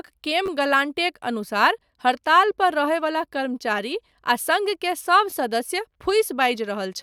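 Repeated buffers occur at 0.46 and 5.30 s. Audio arrived late, so a 10.7 ms piece played twice more, which fits a 512-sample buffer. Each sounds like a brief buzzy click.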